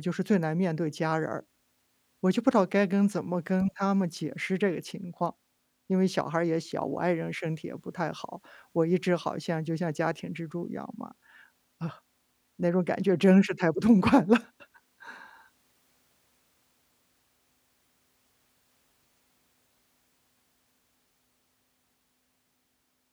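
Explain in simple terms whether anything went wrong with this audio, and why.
Listening through the recording, nothing stood out as having gone wrong with the sound at any point.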